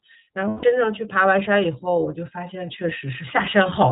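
The speech is narrowband and muffled throughout, with nothing above 4 kHz, and has a plainly audible rough, synthetic edge. This is the iLBC codec, which fits its 13.33 kbps mode. It codes each 30 ms frame's excitation independently and discards everything above the telephone band.

From 0.48 to 0.64 s the sound turns into a held, slightly buzzy, breathy tone before the voice returns almost at once. These are lost iLBC frames. About 150 ms went missing, which fits five 30 ms frames. The decoder repeated the last pitch cycle mixed with noise to fill the gap.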